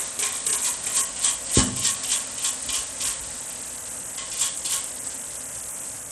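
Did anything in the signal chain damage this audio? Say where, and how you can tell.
Yes, at the codec stage, throughout all 6 seconds. The treble thins and flickers, and a gritty, aliased noise rides on the sound. This is likely Bluetooth SBC compression at a low bit pool, which fits about 80 kbps. Starved upper sub-bands lose their bits.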